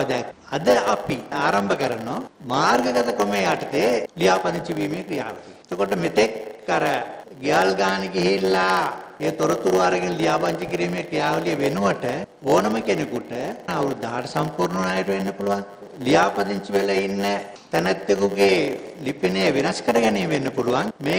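From start to finish there's a block size mismatch (padded) going on. One stage hands over blocks a bit shorter than the next stage reads, and the leftover space in each block gets filled with zeros. That puts a tiny gap in every block, which you hear as a steady 100 Hz buzz, one gap every 10 ms. It also stretches everything out, so the audio plays at about 0.92 times normal speed while its timbre stays the same.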